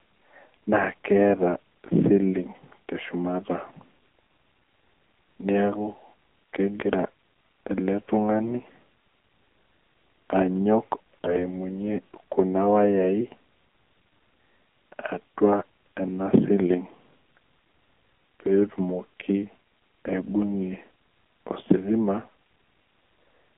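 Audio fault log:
throughout AMR narrowband mobile codec: speech forced through a low-rate vocal-tract model, which fits about 7.4 kbps, sounds buzzy and synthetic, confined to 200 Hz to 3.4 kHz.
11.24 to 11.41 s AMR bit errors: a weak link flipped a few percent of the lightly protected frame bits, misplacing the excitation pulses, so the voice turns hoarse and gargly while keeping pitch and level.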